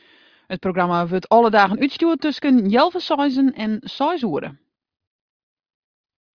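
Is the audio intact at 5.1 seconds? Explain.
Yes, the speech at 5.1 seconds plays through intact, with no audible fault at that moment.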